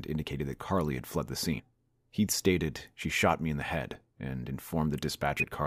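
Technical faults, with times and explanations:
1.58 s, 3.00–3.05 s and 5.39–5.43 s: compressed frames skipped. Roughly 100 ms, 20 ms and 100 ms of audio vanish as whole frames go missing or are rejected by the decoder, so playback jumps ahead.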